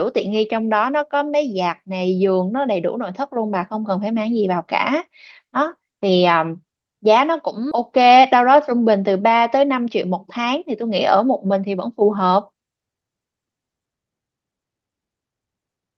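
At 7.71 to 7.73 s the speech does a skip ahead: around 0.4 s of audio got thrown away, probably when the jitter buffer overflowed with later packets already queued. Playback just jumps forward with no gap filling it in, so the two sides butt right up against each other.

From 9.62 to 12.26 s you get a jitter buffer speed-up. The buffer had built up more delay than it wanted, so it kept snipping out tiny pitch-period slices, roughly 150 ms in total. The speech runs about 5% fast at the same pitch and comes across a bit rushed. Through all of this the Opus call path's normal coding texture is audible, with the top end stopping around 8 kHz.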